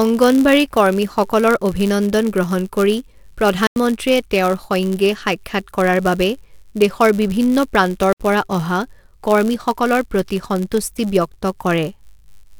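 A block size mismatch (padded) runs through the whole speech clip from the first second. One stage hands over blocks slightly shorter than the next stage expects, and the shortfall in each block is filled with zeros. Those tiny regular gaps form a buzz at 99.6 Hz, the block rate, and stretch the audio so it plays at 0.996 times normal speed, slightly slow, while the timbre stays.

A block of digital silence opens at 3.67 s and lasts to 3.76 s, a hole of about 93 ms just before "তেওঁৰ সৈঙ্গে সাক্ষাৎ কৰাৰ". Its length fits a 4096-sample block of zeros. A second block of digital silence follows from 8.13 s to 8.20 s, about 70 ms, between "কৰাৰ বাবে দেশৰ বিভিন্ন" and "পৰা অহা কৰ্মীসকলৰ প্ৰতি". Both dropouts cut abruptly with no fade around a short hole.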